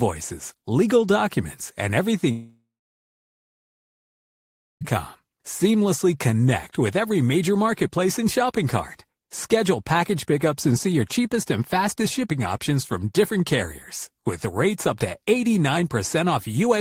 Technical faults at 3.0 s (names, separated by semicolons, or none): long network dropout